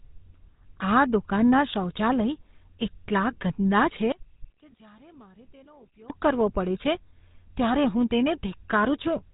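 From start to finish, the speech carries the sound of the GSM full-rate codec, and the damage is plainly audible. The codec rebuilds the voice from a vocal-tract model driven by sparse, evenly spaced pulses. That coarse excitation gives the voice a buzzy, gravelly roughness. The band also stops short. Nothing comes through above about 3.8 kHz, so the sound is dull and narrow. The rate fits a 13 kbps stream.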